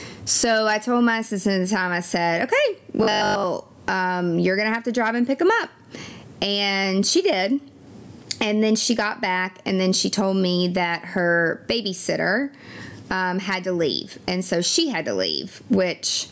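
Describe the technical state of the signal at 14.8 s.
At 14.8 s the speech shows gain pumping, present throughout the clip. The gain swings by around 25 dB, pulled down under every loud syllable, likely from excessive input gain driving a fast limiter. Dynamics sound squashed, and the call band stops near 8 kHz.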